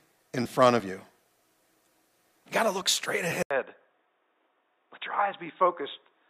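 At 3.43 s, after "got to look straight", an 80 ms gap. Input likely switched to a poorer device. Speech turns dull, cut above 3.8 kHz, and quieter.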